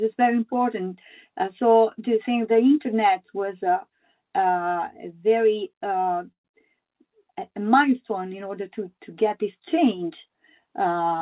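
At 6.32 s the sound stops short and you get a hole lasting until about 6.46 s. A brief tail of the last sound carries on and dies away, then roughly 110 ms of it is dead silent. That's a call audio freeze, most likely packets held up in transit so the jitter buffer ran dry. Playback resumes where it left off, so nothing is lost, but about 124 ms of extra delay gets wedged in.

Right after, between 6.52 and 6.55 s, there's a skip ahead. A short piece of audio, something like 70 ms, is simply gone, and the two sides are butted together almost directly. You hear it as a tiny jump or stumble rather than a gap.

Then from 6.98 to 7.60 s there's a jitter buffer slow-down. The buffer's topping itself up by repeating single pitch periods and bits of pause, adding 61 ms over that stretch. The audio runs at about 91% speed with the pitch unchanged, so things sound a bit drawn out. All of this sits inside the narrow telephone band of the G.711 link, with nothing above 4 kHz.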